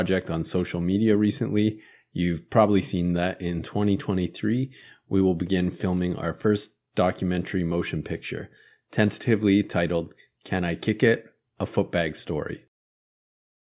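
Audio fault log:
No technical faults are audible in this speech recording; the signal stays continuous and stable throughout.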